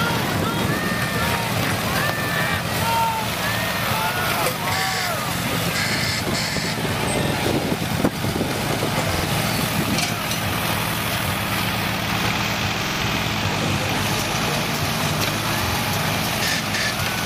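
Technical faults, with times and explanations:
5.39–5.43, 7.25–7.34, 9.15–9.24, 12.86–13.00 and 15.65–15.74 s, repeated buffer: a 46 ms block, which fits a 2048-sample buffer, replays one to three extra times when fresh audio arrives late. Each repeat is a brief stutter with hard joins. On the waveform, identical segments sit side by side, and the spectrogram shows copied patches split by thin vertical broadband click lines.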